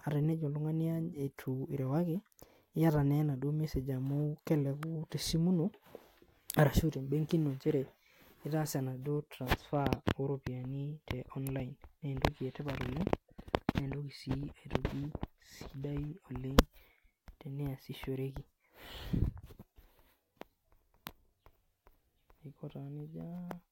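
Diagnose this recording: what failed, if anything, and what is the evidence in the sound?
Two brief snaps ride on top of the speech, at 4.83 s just after "message amu" and at 11.47 s, the second slightly louder. An electrical switching spike likely coupled into the analogue wiring. Unlike a buffer dropout, the speech continues unbroken beneath each snap.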